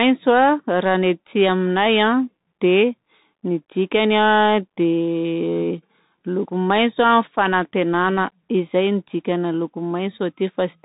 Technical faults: Bluetooth CVSD headset codec

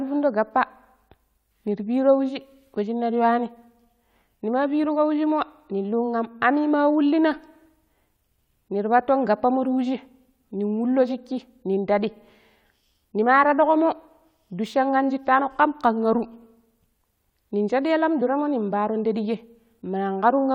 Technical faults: compressed frames skipped

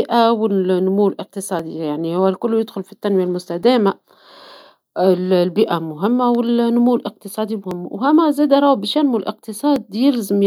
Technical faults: clock drift buffer slips

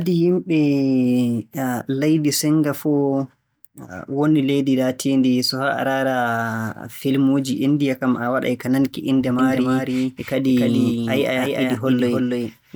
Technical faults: doubled audio track

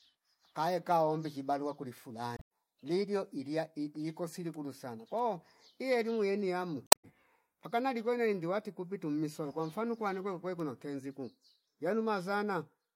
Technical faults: damaged data in a compressed stream

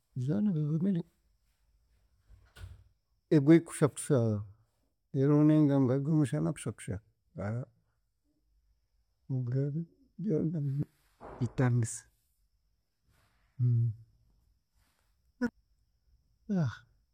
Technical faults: adaptive stream at a lower bitrate

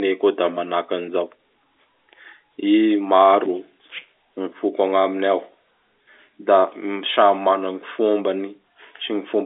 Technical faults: none

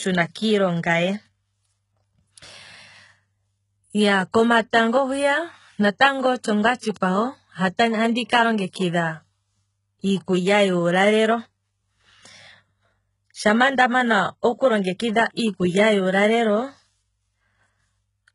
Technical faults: HE-AAC compression; pre-echo

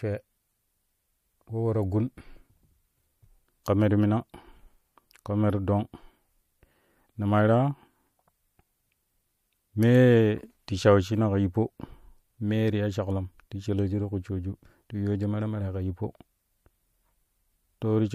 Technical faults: pre-echo

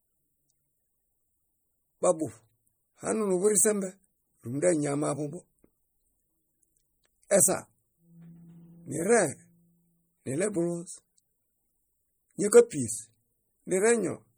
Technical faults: MP3 compression; pre-echo

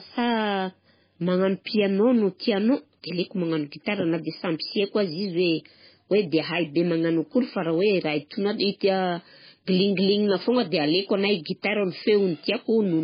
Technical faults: MP3 compression

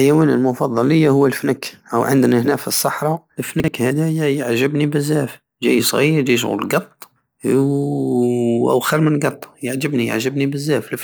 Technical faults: chunks out of order

